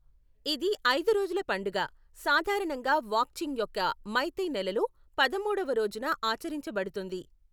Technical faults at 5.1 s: none

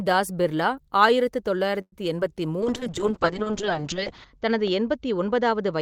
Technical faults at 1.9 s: call audio freeze

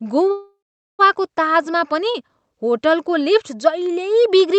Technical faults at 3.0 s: none

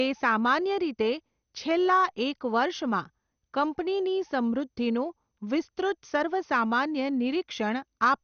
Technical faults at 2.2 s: MP2 compression

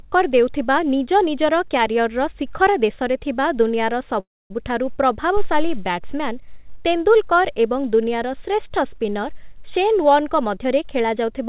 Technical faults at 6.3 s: none

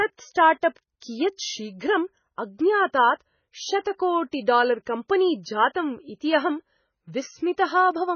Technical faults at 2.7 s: MP3 compression

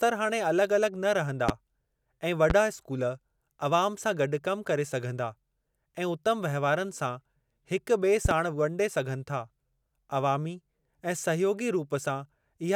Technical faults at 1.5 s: loud pop

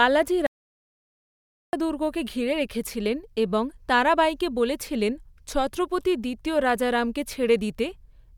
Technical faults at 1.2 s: audio dropout to silence

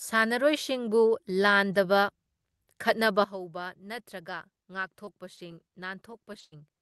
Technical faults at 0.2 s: none

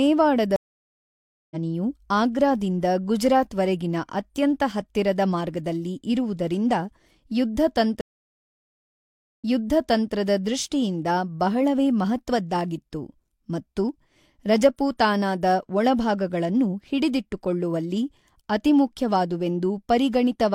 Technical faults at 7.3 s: none

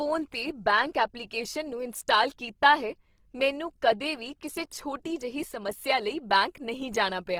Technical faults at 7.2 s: Opus compression

